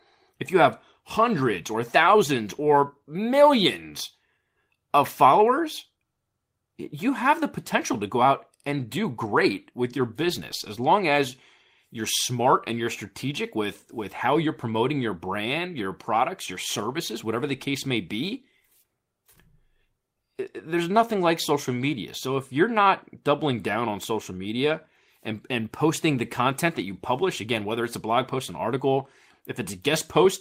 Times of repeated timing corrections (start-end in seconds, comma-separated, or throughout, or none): 0.12-30.25